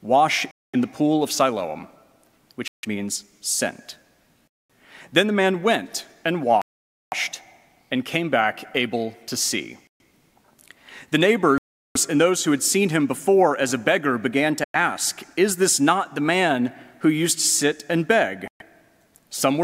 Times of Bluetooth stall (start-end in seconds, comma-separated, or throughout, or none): 0.51-0.75, 2.68-2.85, 4.48-4.71, 6.62-7.14, 9.87-10.01, 11.58-11.97, 14.64-14.76, 18.48-18.62